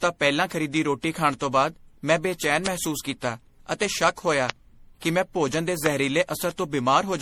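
Generation loss runs throughout the speech: a swirly, hollow, smeared sound with blurred attacks, likely from around seven passes through a lossy codec, consistent with repeated 64 kbit/s MP3 encoding. Loud pops occur at 2.66, 4.50 and 5.86 s, each a single sharp click roughly 20 dB above the speech, likely from brief voltage spikes.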